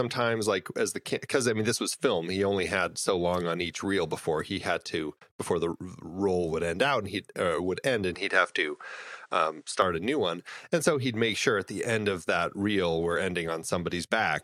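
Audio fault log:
8.15–9.82 s, input switched to a poorer device: likely a changed input after "he uh would end" cuts everything above 10.5 kHz and adds faint noise until "a new one".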